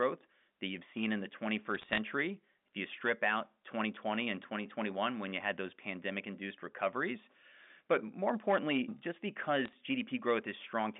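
Bit errors on a digital phone line produce crackle from 1.75 to 1.98 s, after "you've seen in the", and a shorter, sparser burst from 9.65 to 9.74 s, after "more importantly just". Flipped bits corrupt individual G.711 samples, and sign or high-bit hits become sharp ticks over the line's 200 Hz to 3.6 kHz speech.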